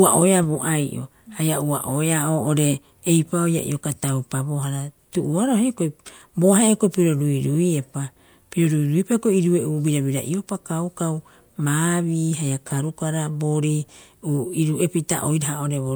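Speech recording with no audible technical faults.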